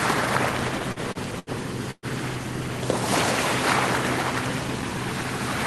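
The clip is everyday sound carried over a call link, with the top end limited to about 12 kHz, which fits an Opus codec. From 0.79 s to 1.50 s there are repeated stalls, a stutter. The sound halts four times. Each halt is filled by stretching the last sound, for 154 ms in all. The longest fill lasts 78 ms. About 22% of that stretch is filler. Nothing is lost. Packets arrived late or too slowly, and the jitter buffer kept running dry. So the sound drags and catches. At 1.91 s a call audio freeze begins and runs to 2.06 s. The last sound is held for 119 ms and fades, leaving about 30 ms of silence. Then the sound resumes exactly where it stopped. Nothing is missing, but a gap is inserted and everything after it arrives 119 ms later. The likely cause is packets held up in transit, emptying the jitter buffer until they arrived.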